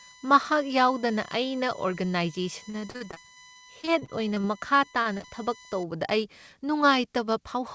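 Speech over a call link, and the band tops out at 8 kHz, which fits a G.722 path at 64 kbps. From 0.00 to 5.83 s there's a USB whine: a fixed tone built on 1 kHz, with its strongest component up at 12 kHz, sitting roughly 20 dB below the speech. That's the bus's 1 ms frame rhythm pulling current and leaking into the audio through the power or ground, which is why the pitch never moves. From 2.70 to 4.45 s you get repeated packet loss with that robotic sound: a rapid string of short holes, the longest 44 ms, each patched by stretching the last bit of sound. About 23% of the stretch is concealment rather than real audio, so it comes across choppy and robotic with pieces missing. Overlapping that, from 4.33 to 4.91 s, there's a jitter buffer slow-down. The receiver was either running low on reserve or had just raised its target delay, and built up a reserve by repeating single pitch periods, adding 66 ms, so the speech plays at about 90% speed with the pitch unchanged. 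Sounds get drawn out. Then the packet loss comes back briefly from 4.92 to 5.26 s, with a few short holes, the longest 30 ms, and about 28% of that span concealed. It's the same choppy, robotic patching, just over a shorter stretch.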